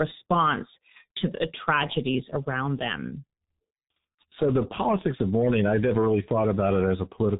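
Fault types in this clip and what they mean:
G.723.1 codec: a low-rate telephony coder, which fits about 6.3 kbit/s, discards everything above 3.8 kHz, leaving this speech heavily muffled, hoarse, with smeared consonants throughout.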